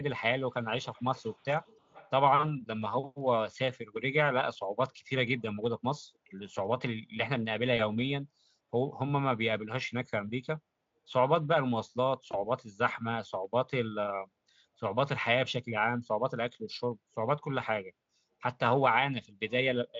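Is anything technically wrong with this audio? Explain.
Yes. The speech contains two faults.

From 0.82 to 2.1 s there is an echo leak, likely from a far-end loudspeaker whose echo canceller let some sound through. A faint copy, roughly 25 dB down, trails about 314 ms behind and shows as weak repeated spectrogram traces.

VoIP packet loss concealed by the speech codec appears at 7.77–7.82 s and 12.31–12.42 s. Each gap fits one lost 20 ms frame. The decoder extrapolates the previous sound into a brief, fading smear. On a spectrogram this is smoothed, flattened harmonics, and the waveform shows a dip in amplitude.

The Speex coding leaves at most faint hoarseness.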